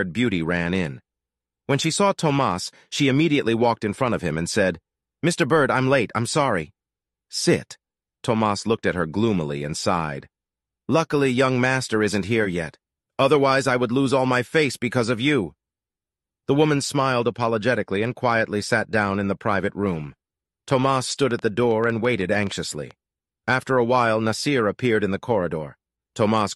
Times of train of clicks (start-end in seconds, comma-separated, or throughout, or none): 20.70-22.92